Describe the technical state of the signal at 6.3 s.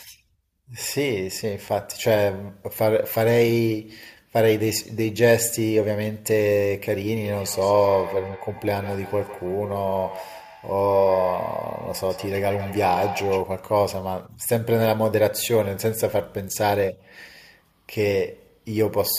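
At 6.3 s the speech signal is intact, with no audible fault at that moment.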